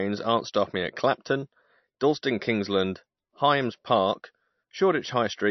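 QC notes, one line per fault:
Throughout, MP3 compression: the speech has nothing above 6 kHz and a plainly watery, swirling texture, likely from an MP3 encoder starved of bits, which fits a bitrate around 35 kbps, cutting the treble and letting weak frequency lines flicker between frames.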